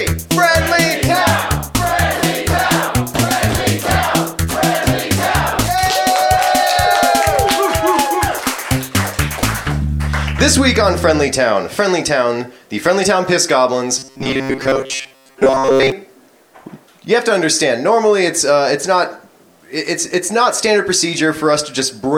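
Robotic sound from repeated short buffers, from 13.99 s to 15.92 s: the audio turns into a rigid, metallic buzz pitched near 134 Hz. This likely comes from new audio arriving too late, so roughly 7.5 ms snippets are replayed in place of most of the real signal.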